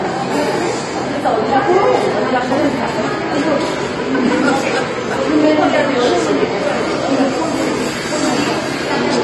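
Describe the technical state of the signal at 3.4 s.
AAC compression damage is present at 3.4 s, as it is across the whole recording. Nothing survives above 12.5 kHz, and the remaining spectrum has a plainly audible dull, smeared quality with a watery, fizzy edge on sustained and noisy parts. This is likely AAC-LC coding at a low bitrate, which fits roughly 32 kbps: the encoder drops high frequencies and coarsely quantises or noise-fills the bands it keeps.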